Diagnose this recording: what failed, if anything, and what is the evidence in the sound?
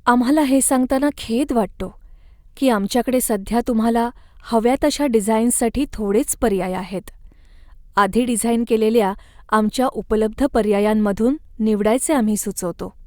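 Nothing failed; no faults heard.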